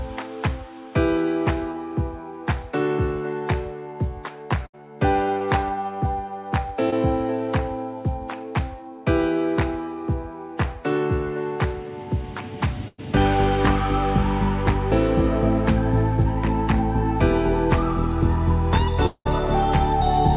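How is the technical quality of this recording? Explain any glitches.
The recording has been through a narrowband call link. Nothing reaches above 4 kHz, which fits G.711 mu-law telephone coding. Six network glitches break the flow.

Short concealed packet loss occurs at 1.72 to 1.76 s, 5.39 to 5.42 s and 6.90 to 6.94 s. Each time, about 20 ms of audio failed to arrive in time. The receiver patched the hole by extending the preceding sound for 10 to 20 ms, then blended back into real audio. Each one is a brief smear or wobble, and a short sound there can vanish.

A burst of packet loss hits at 4.66 to 4.75 s and again at 12.88 to 13.00 s. Several packets in a row went missing, about 80 ms and then 100 ms of audio. The receiver continued the last sound and faded it down. That gives a held buzz or fading hiss rather than a clean gap. The second burst ends in roughly 30 ms of silence. Then the sound resumes further along, with the missing stretch simply skipped.

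A long network dropout likely caused the gap at 19.06 to 19.27 s. About 200 ms of audio never played. Concealment stretches the last sound for most of that span as a fading buzz or hiss. Roughly 60 ms of silence follows before the audio returns. The part that was lost does not come back.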